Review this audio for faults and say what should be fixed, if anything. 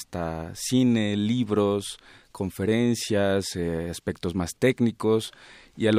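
Nothing here needs fixing, since no faults turn up anywhere in this stretch of speech.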